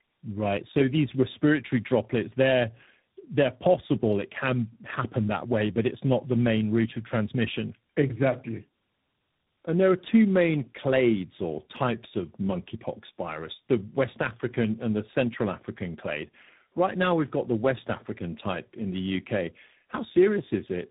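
A speech recording whose whole length carries tandem speech coding. The sound points to a call that crossed several networks, probably passing through AMR-NB, G.729A and G.726 with G.711 links between them, decoded and re-encoded at each border. Each coder models distortion left by the one before, so errors stack: the speech is rough, muffled and warbly throughout, worse than any one codec alone, with nothing above about 3.8 kHz.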